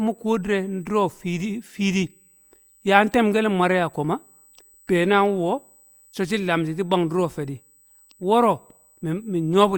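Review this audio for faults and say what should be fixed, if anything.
USB whine runs throughout the speech as a steady 8 kHz tone, roughly 35 dB below the signal, from 125-microsecond bus microframes leaking through power or ground. Isolate the audio interface's supply and ground from USB, using a powered hub or ground-loop isolator.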